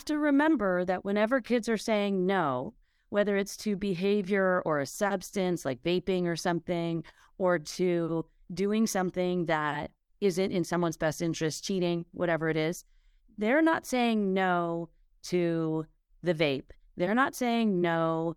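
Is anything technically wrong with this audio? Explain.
No, nothing is technically wrong.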